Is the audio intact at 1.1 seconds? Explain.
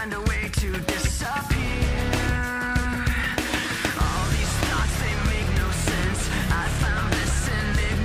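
Yes, the audio at 1.1 seconds is intact, with no dropout, click, distortion or other fault at that point.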